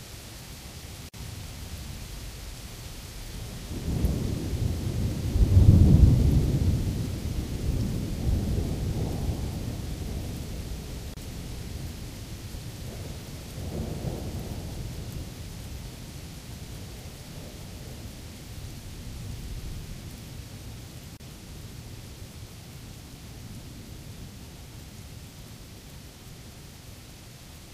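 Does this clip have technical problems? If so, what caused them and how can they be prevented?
Yes. There is a gap at a join of encoded pieces, heard three times: 1.09 to 1.14 s (48 ms), 11.14 to 11.17 s (31 ms) and 21.17 to 21.20 s (31 ms). The sound was encoded in 10-second pieces and joined untrimmed, so each encoder's startup delay and final-frame padding survive as short silences. Unlike a dropout, no sound is lost: it resumes exactly where it stopped, the silences repeat every 10 s, and their edges are smeared. Encode the material in one pass, or trim the encoder delay and padding at each join.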